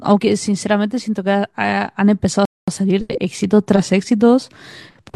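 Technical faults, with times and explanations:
2.45–2.68 s, rebuffering stall: the player exhausted its downloaded audio and halted until more data arrived, so the speech drops abruptly into silence for about 223 ms, then picks up exactly where it stopped, with nothing missing, only added time.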